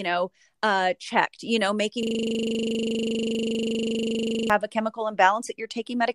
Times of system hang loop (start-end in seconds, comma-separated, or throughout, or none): 2.03-4.50